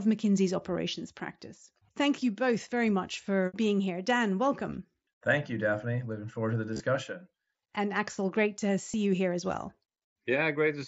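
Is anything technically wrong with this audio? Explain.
Yes. Concealed Bluetooth headset packet loss occurs at 6.74–6.80 s, after "forward to the", and at 8.92 s, between "great to" and "you here as well." Lost voice packets were filled by repeating the closest-matching recent waveform, leaving a brief buzzy hold with a slight warble as the real speech resumes. The mSBC headset codec carrying the link adds only light graininess.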